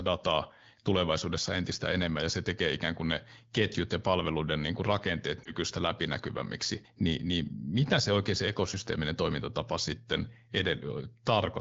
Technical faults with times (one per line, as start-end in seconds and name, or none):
5.43-5.53 lost AMR speech frames